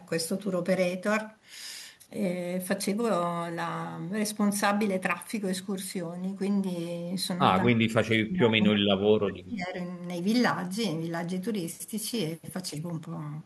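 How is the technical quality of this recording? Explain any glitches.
The recording has one noticeable glitch: speech suppressed in double talk. From 7.64 to 9.76 s the speech drops by about 35 dB, likely an echo canceller muting it during overlapping talk. The waveform pinches nearly flat, and the spectrogram shows faded bands.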